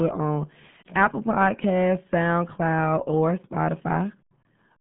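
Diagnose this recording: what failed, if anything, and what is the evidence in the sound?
The failure is at the codec stage, and it lasts the whole clip. The speech is muffled and gargly, the signature of the RealAudio 14.4 codec. Nothing passes above about 3.7 kHz. The usable band sits between 150 Hz and 3.5 kHz, like a phone line. The damage is heavy and fits a very low rate, around 8 kbit/s. At that rate the coder keeps only a coarse model of the speech. Fine detail is lost, and the gargling comes from that rough rebuild.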